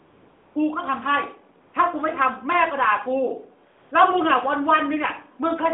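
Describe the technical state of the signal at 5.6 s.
At 5.6 s the signal is intact, with no fault present.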